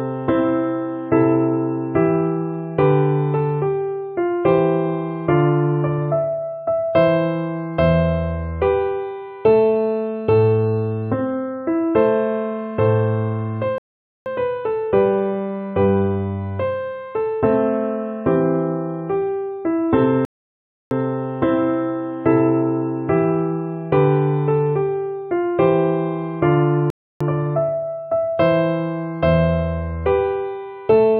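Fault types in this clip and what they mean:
Rebuffering stall: at 13.78 s, 20.25 s and 26.90 s the audio drops to silence and then picks up exactly where it left off, after about 0.48 s, 0.66 s and 0.30 s respectively. The player has run through its downloaded data and waits for more to arrive before continuing, so nothing is skipped or lost, but each gap stretches the playback and breaks the flow of the sound.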